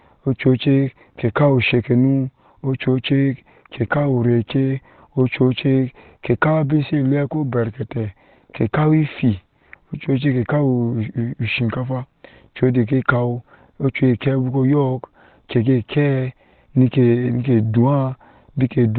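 Throughout, Opus compression, likely in SILK speech mode at a rate fitting 16 kbps, removes everything above 4.2 kHz, so the speech sounds muffled and hoarse.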